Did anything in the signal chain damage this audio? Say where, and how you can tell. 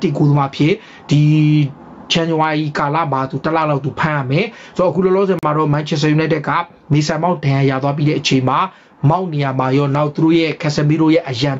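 Yes. At the input stage, the gain feeding the microphone path is set far too high, and a fast limiter or compressor is likely pulling it back down on every loud moment. The result is gain pumping across the whole clip. The level swings by around 15 dB. Loud and soft passages are squeezed close together, flattening the sound.

At playback, the wireless link broke down briefly in a Bluetooth stall. Interference appears to have held up packets, so the headphone buffer ran empty and output halted until the resent data arrived. At 5.39 s the sound drops out to complete silence for 40 ms, then carries on. The gap is a clean hole rather than a click or a smeared patch, which is what a buffer running dry sounds like.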